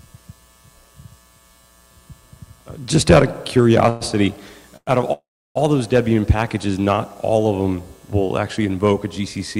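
Three call audio freezes interrupt the sound at 3.89 to 4.03 s, 4.77 to 4.89 s and 5.13 to 5.57 s. Each time, the last sound is stretched into a fading buzz or hiss. The second decays into about 30 ms of silence, and the longest falls silent for roughly 320 ms before resuming. Nothing is lost; playback simply picks up late. That behavior points to packets likely held up in transit and an emptied jitter buffer, adding about 0.64 s of total delay.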